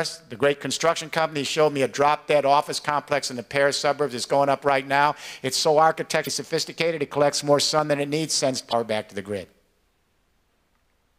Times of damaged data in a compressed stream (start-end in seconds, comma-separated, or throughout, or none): 6.23-6.28, 8.69-8.73